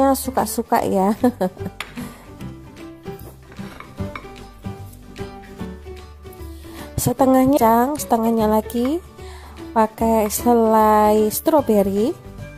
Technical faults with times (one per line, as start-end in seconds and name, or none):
7.53-7.59 stream segment skipped